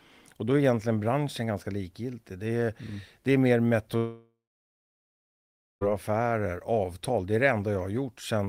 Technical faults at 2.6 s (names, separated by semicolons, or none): none